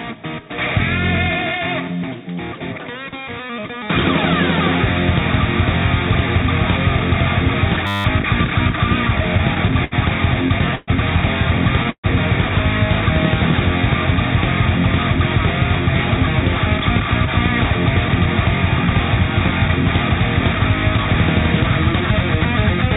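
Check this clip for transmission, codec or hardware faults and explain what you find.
Four faults turn up, spread across the clip. The audio passes through a call codec whose band stops at 4 kHz, which fits G.711 mu-law.

System hang loop, 7.87 to 8.05 s. The driver or computer stalled, but the sound hardware kept replaying its ring buffer. A 10 ms slice repeats 18 times, so the loop runs at 100 Hz. Because the buffer is so short, this sounds like a steady buzz rather than a stutter. The underlying audio is not lost. It is frozen in place for that moment.

Repeated stalls (stutter), 9.08 to 10.9 s. Packets kept arriving late, and the jitter buffer ran dry 12 times. Each time, the receiver stretched the last sound to fill the wait. These fills add up to 295 ms, and the longest is 122 ms. About 16 percent of the span is concealment. Nothing is dropped. The audio drags and stutters along, with the longer fills fading.

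Call audio freeze, 11.90 to 12.07 s. The sound stops flowing and is carried on as a fading continuation for 132 ms. About 70 ms of that is silence. The audio then resumes exactly where it left off, with nothing missing. The likely cause is packets held up in transit, which emptied the jitter buffer and added 132 ms of delay.

Jitter buffer speed-up, from 20.55 s to the end. The buffer held more audio than its target, so the receiver trimmed many short pitch-period pieces to cut the delay. Playback runs at about 103 percent of normal speed. The pitch stays the same. The effect is timing slightly compressed rather than raised in tone.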